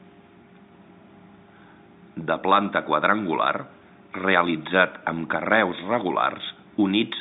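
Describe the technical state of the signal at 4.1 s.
At 4.1 s the speech is intact, with no fault: it comes through the G.711 telephone line band at its usual narrow width, roughly 150 Hz to 3.7 kHz, and nothing breaks into or disturbs it there.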